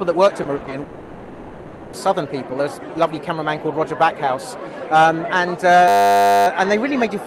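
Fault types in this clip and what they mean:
Repeated packet loss (robotic sound): choppy sound with pieces missing from 0.43 to 0.73 s, where four short gaps of up to 60 ms were filled by stretching the preceding audio.
Long network dropout: from 0.83 to 1.95 s the sound smears into a drawn-out, fading continuation with no true silence, likely because about 1.1 s of audio never arrived.
System hang loop: a steady 100 Hz buzz from 5.88 to 6.47 s as a 10 ms slice repeats 59 times while the system froze, with almost no audio lost.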